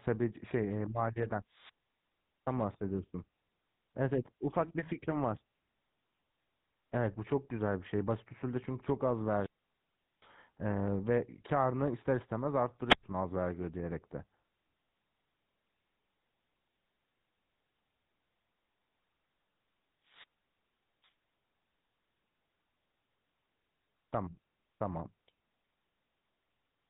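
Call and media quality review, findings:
GSM full-rate codec, whole clip. Buzzy, gravelly roughness on speech, plainly audible; band capped near 4 kHz. Pulse-train excitation decimated to every third sample, consistent with a 13 kbit/s GSM full-rate stream somewhere in the path.

Wireless microphone squelch dropouts at 1.48–2.56 s, 9.24–10.33 s, 12.85–13.03 s, 20.05–21.12 s. Each shows a hiss rise, then a near-silent gap of 0.78, 0.76, 0.10 and 0.80 s. FM link fading below the receiver squelch threshold, output muted until the carrier recovers.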